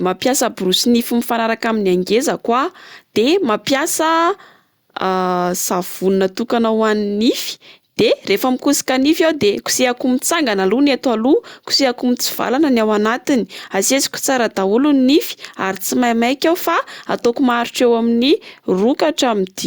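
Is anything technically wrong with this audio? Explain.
No, nothing in this speech recording points to a technical fault. I hear no problem anywhere in the audio.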